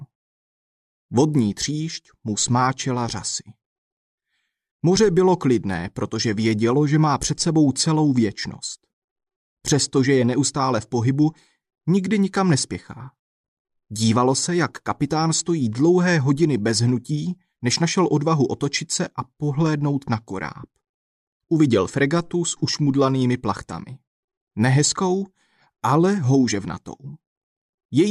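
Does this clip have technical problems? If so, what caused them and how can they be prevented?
No, this clip has no technical problems, so there is nothing to trace to a cause or prevent.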